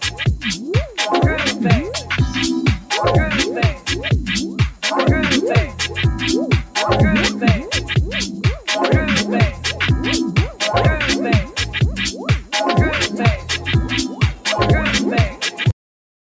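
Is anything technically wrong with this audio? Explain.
Yes, three related faults are present.

A noise suppressor applied to music or sounds runs through the whole clip. Tuned for speech, it treats sustained tones and ambience as noise and keeps shifting its gain, so the level swings by roughly 5 dB and held material pumps and thins while attacks pass through.

Sound cut by the noise suppressor is heaviest at 4.49–4.83 s, 8.27–8.68 s, 12.12–12.53 s, 13.4–13.67 s, 14.08–14.46 s and 15.3–15.6 s. In each, the suppressor judged the material to be noise and pulled it down by about 9 to 10 dB (about 4 dB at 13.4 s), so it briefly sinks or its decay is clipped short.

A cut-off end occurs at 15.71 s. The final buffers were never written, so the sound stops mid-event and drops straight to digital silence with no natural decay, leaving dead air to the end. The missing content above 8 kHz comes from the call's normal microphone processing.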